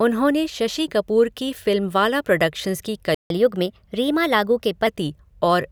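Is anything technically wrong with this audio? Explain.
Yes. The speech has two connected playback faults.

A playback stall occurs from 3.15 to 3.30 s. The speech cuts to silence in mid-flow for about 157 ms. The likely cause is the player running out of buffered data, or its audio thread being blocked, so nothing reached the output until it recovered. The gap is short but clearly audible as a hard break.

Catch-up at higher speed follows straight away, from 3.30 to 4.87 s. The player works through its backlog by resampling at 1.1 times normal speed. That raises the pitch by roughly a semitone and a half. The speech sounds hurried and slightly higher for about one and a half seconds.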